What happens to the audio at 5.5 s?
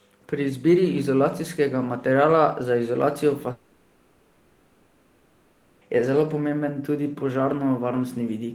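At 5.5 s the stream is inside a long network dropout, most likely a break in packet delivery lasting from 3.51 to 5.83 s, right after "za izolacijo". With about 2.3 s of audio missing, the receiver covers the whole gap by extending the last sound: a buzzy, hissy continuation that fades into a low steady noise. That noise is what plays at 5.5 s, until normal sound resumes at 5.83 s without the lost portion.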